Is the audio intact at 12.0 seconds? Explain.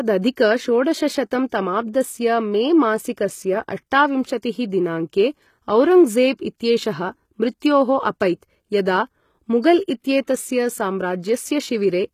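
No, the speech there carries the HE-AAC compression heard throughout: treble up to 14.9 kHz sounds rebuilt and plainly gritty rather than simply dulled, likely from spectral band replication at a low bitrate.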